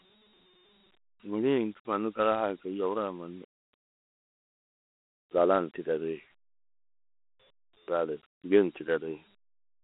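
From start to finish the speech carries Dialogic VOX ADPCM damage, plainly audible. The codec stores each sample as a 4-bit step from the last, which fits 32 kbps at 8,000 samples a second. It can't track fast changes, so a gritty hiss rides on the speech and rises and falls with it, unlike the steady hiss of a noisy line. The band runs about 250 Hz to 3.5 kHz, with nothing above 3.9 kHz.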